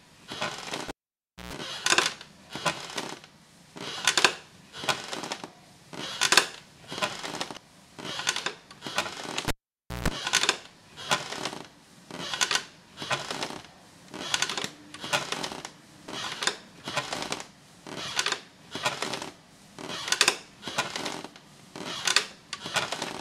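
A recording of everyday sounds with two kinds of fault. The cable was pulled and plugged in twice, at 0.88 to 1.53 s and 9.48 to 10.08 s: each time a pop opens a dropout of about 0.6 s, a 60 Hz mains buzz lasting 0.13 s and 0.15 s respectively cuts in as the plug makes partial contact, and a second pop marks the return. Damaged data in the compressed stream made the decoder lose sync at 7.54 to 7.57 s and at 16.08 s, producing brief glitches.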